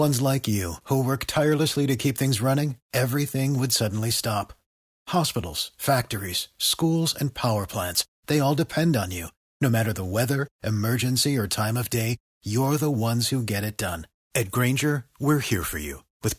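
No technical faults can be heard anywhere in the speech. There is nothing to place on the timeline.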